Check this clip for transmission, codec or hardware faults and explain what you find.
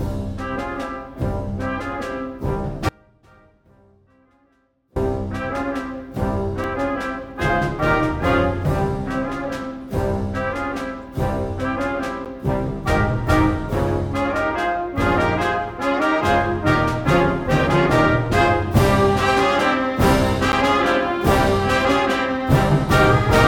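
Two kinds of fault are present: one longer dropout and three short blocks of digital silence.

From 2.89 to 4.96 s the sound suffers an audio dropout to a faint residue. For about 2.1 s the signal collapses abruptly, leaving only a faint leak of the sound roughly 30 dB below its normal level before it snaps back. The likely cause is a break in the upstream signal path while the chain after it stayed live. Because the gap still holds sound rather than true silence, and both edges are sudden rather than faded, it differs from a natural pause or from the zeroed blocks below.

Blocks of digital silence occur at 6.64 s and at 12.25 to 12.26 s and 20.52 to 20.53 s. The first is a 2 ms hole that is heard as a tick. The later two each last about 10.7 ms, which fits a 512-sample buffer left unfilled in time, and they come across as ticks or dips. Unlike the dropout, nothing remains inside these gaps.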